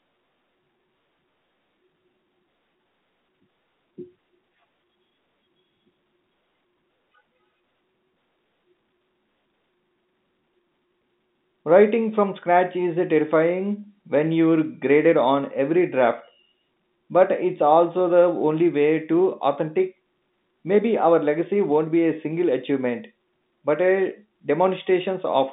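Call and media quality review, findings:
No faults found in the speech; it sits within the narrow telephone band of roughly 150 Hz to 3.7 kHz expected of a G.711 A-law line, with at most a faint level-tracking quantisation floor.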